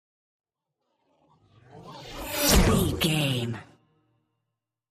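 Three sharp single clicks at 1.1, 2.21 and 3.21 s are likely dropped samples: under a millisecond of signal lost, a waveform jump with no audible gap, unlike a dropout.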